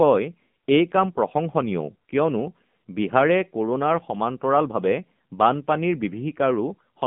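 From start to finish the speech sounds thin, boxy and buzzy, with a clearly synthetic edge. Nothing comes through below about 150 Hz or above about 3.5 kHz. This is the AMR narrowband mobile codec: the signal is squeezed into an 8 kHz telephone channel and rebuilt from a vocal-tract model fed by sparse pulses. The strength of the buzz fits a low mode of about 7.4 kbps.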